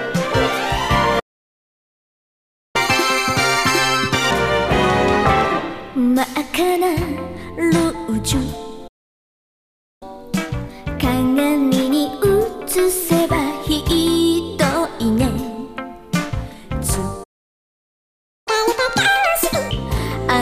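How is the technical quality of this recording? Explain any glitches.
The recording has a repeated delivery problem: three dropouts, each followed by a stretch of sped-up playback.

A playback stall occurs at 1.19 to 2.76 s, 8.87 to 10.03 s and 17.23 to 18.48 s, cutting the sound off for about 1.5 s, 1.1 s and 1.2 s. This is likely the player running out of buffered data or having its output thread blocked. On a waveform each stall is a flat line. On a spectrogram it is a blank vertical band across all frequencies.

Catch-up at higher speed follows each stall as the player resamples its backlog to regain lost time. From 2.76 to 4.31 s and from 18.48 to 19.71 s it runs at 2× speed, pushing pitch up by roughly 10 semitones, a chipmunk-like rush. From 10.03 to 13.03 s it is milder: 1.1× speed and a rise of a semitone or two. A spectrogram shows the harmonics shifted upward and events packed closer together, then dropping back to normal spacing and pitch.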